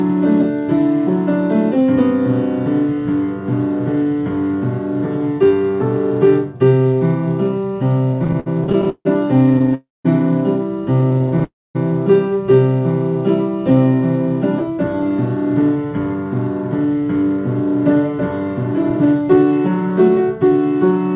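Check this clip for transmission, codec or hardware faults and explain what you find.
The clip has three kinds of fault, all on the receiving side of a call link. Throughout, the audio is band-limited with nothing above 4 kHz, consistent with a G.711 mu-law path at 64 kbps.

Repeated stalls (stutter) occur from 8.14 to 9.74 s and again from 11.01 to 11.42 s. Packets reached the receiver late, so its jitter buffer kept running dry and it repeatedly stretched the last sound to cover the gaps. The first stretch has 19 gaps totalling 384 ms, the longest 155 ms, covering about a quarter of the span. The second has 8 short gaps of up to 16 ms. Nothing is lost, but the sound drags and judders.

A call audio freeze follows each stutter, from 9.74 to 10.07 s and from 11.44 to 11.77 s, each lasting about 0.3 s. The likely cause is a longer hold-up of packets that emptied the buffer completely. The receiver extends the last sound, which fades out, leaving silence for 190 ms in the first freeze and 230 ms in the second. 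Playback then resumes where it stopped, inserting a delay rather than dropping audio.

A jitter buffer speed-up runs from 13.70 to 19.90 s. After the stalls, the buffer held more audio than its target, so the receiver trimmed many tiny pitch-period slices to cut the backlog. Over this stretch it removes about half a second. Playback runs at about 107% speed without any pitch change, so the audio sounds slightly rushed and its timing is compressed.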